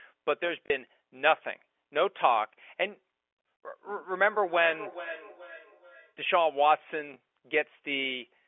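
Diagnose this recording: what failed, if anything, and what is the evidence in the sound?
Packet loss with last packet repeated, at the network stage. From 0.66 to 0.70 s about 40 ms of audio is replaced by a repeat of the preceding segment, which fits two 20 ms packets lost in a row. It is heard as a short robotic stutter. At 7.14 to 7.16 s a single 20 ms repeat gives a small blip. A silence dropout would leave a gap, but here the receiver filled the hole by replaying the last packet it had.

Feedback echo between two devices, in the call path across two devices in one room. From 4.28 to 6.17 s the speech comes round again at a fixed interval of roughly 0.4 s, with the loudest return about 13 dB below the direct speech. One device plays what the other's microphone sent, and that microphone picks it up again. Each echo canceller removes only its own device's playback, so this loop escapes cancellation. 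A room reflection would arrive much sooner and would not repeat at a steady interval. The narrow 300 to 3400 Hz telephone band comes from the G.711 line and is normal, not part of this fault.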